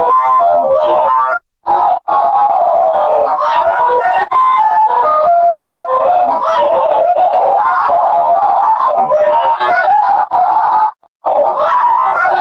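A recording of everyday sounds with two faults. At 5.49 s a call audio freeze begins. The last sound is held briefly, then falls silent for about 270 ms. It resumes at 5.86 s with nothing lost, so the clip now runs 350 ms later. Packets were likely held up in transit, and the jitter buffer ran dry. From 11.04 to 11.34 s there is a jitter buffer speed-up. The sound plays at 167% speed with unchanged pitch, so it feels hurried. The receiver cut short pitch-period pieces, about a fifth of a second in total, to trim the excess delay.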